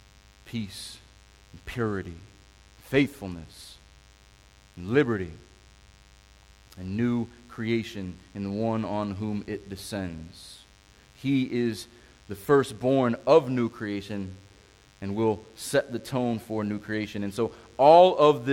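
A DECT cordless phone buzz runs under the speech for the whole clip. A nearby DECT handset or base sends a radio burst 100 times a second. The audio circuit rectifies it. It sounds like a thin, steady 100 Hz buzz with many harmonics, about 35 dB below the speech.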